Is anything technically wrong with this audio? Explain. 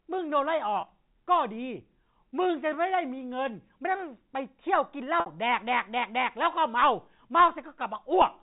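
Yes. Packet loss with pitch repetition occurs at 0.81–0.83 s and 5.20–5.26 s. About 20 ms and then 60 ms of audio never arrived, and the receiver looped the last pitch period to bridge each gap. The first sounds like a brief buzzy hold. The second fades toward silence before the speech cross-fades back in.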